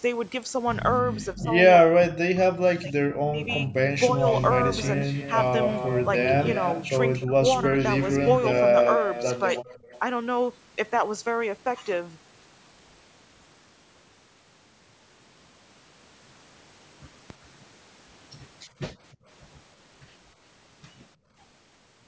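From 1.1 to 4.27 s the speech is suppressed in double talk. The level dips repeatedly, by about 40 dB at its deepest, for around one and a half seconds in total, so the sound loses its top end and breaks into pieces. The likely cause is an echo canceller that could not tell the local talker from loudspeaker echo while both sides spoke, and turned everything down. On a waveform the envelope collapses in ragged bites. A spectrogram shows the upper bands vanishing, in vertical gaps.

From 4.33 to 10.0 s there is an echo leak. A second copy of the speech trails the original by 305 ms, at about 10 dB below it. The likely cause is a loudspeaker-side echo canceller that let part of its microphone pickup through and sent it back. A spectrogram shows faint duplicated harmonic patterns shifted right by about 0.3 s. Inside this stretch, from 7.26 to 7.75 s, double-talk suppression returns more mildly, dipping by about 15 dB for roughly 150 ms.

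From 17.30 to 17.33 s a single loud pop sits on top of the sound, peaking about 5 dB above it, while the audio carries on underneath. It is likely a voltage step or pulse, such as a switch, static or a driver glitch, shaped by the following circuits. The waveform shows one sharp spike. The spectrogram shows a thin vertical line across all frequencies up to the 8 kHz ceiling that the call's microphone processing leaves.

At 19.15 to 19.26 s and 21.16 to 21.36 s the background is gated by the echo canceller. The room sound drops out abruptly, by 25 dB for about 100 ms and then by 17 dB for about 200 ms, and comes back when the canceller releases. The microphone was turned down hard while the loudspeaker played. Both show as short rectangular notches in the noise floor, dark bands across the spectrogram.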